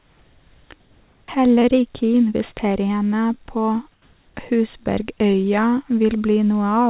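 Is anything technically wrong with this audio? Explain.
Yes. There is comfort noise in place of the background at 0.0 to 0.7 s, 0.8 to 1.28 s and 3.92 to 4.36 s. The likely cause is discontinuous transmission: the sender went quiet in pauses, and the receiver filled them with synthetic noise matched only roughly to the real background, which sits about 36 to 37 dB below the loud parts. Each gap becomes a flat, featureless hiss. The first and third gaps also step in level, by about 6 dB and 4 dB, where they meet the real sound. Nothing is heard above 4 kHz, which fits a G.711 A-law call path.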